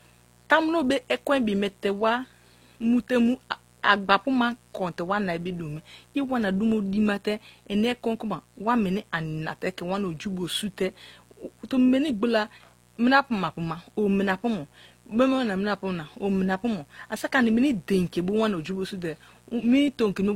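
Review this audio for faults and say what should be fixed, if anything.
A mains buzz runs through the whole recording: a steady, raspy tone built on 60 Hz, with harmonics reaching into the kilohertz range, sitting roughly 35 dB below the speech. Its harshness comes from sharp switching spikes, twice per mains cycle, leaking in from a dimmer, rectifier or poorly shielded cable. Prevent it with balanced, shielded cabling, a clean power circuit and no dimmers or switching supplies near the signal path.

The speech carries a mix of lossy-codec artefacts from start to finish, and nothing is present above 16.3 kHz. The likely cause is transcoding between lossy codecs. The sound points to an Opus encode near 32 kbit/s followed by HE-AAC at a similar rate, where the second encoder spends bits reproducing the first one's damage and then adds its own. Prevent it by encoding once, directly from a lossless source.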